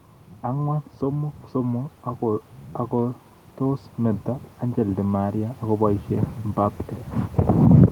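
From 0.44 s to 6.84 s the speech shows automatic gain rising: the gain control judged the input level too low and kept raising its gain, by about 9 dB in total across those six-odd seconds. Because the boost is applied to the whole signal, the voice and the background noise swell together, with the room floor climbing alongside the speaker rather than staying put, so the level creeps upward steadily instead of jumping.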